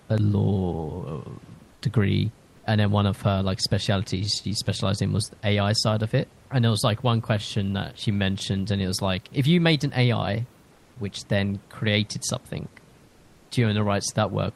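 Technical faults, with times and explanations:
1.73–1.81 s, comfort noise in place of the background: likely discontinuous transmission paused the sender, so the receiver substituted 80 ms of steady, featureless synthetic noise, about 4 dB quieter than the room background.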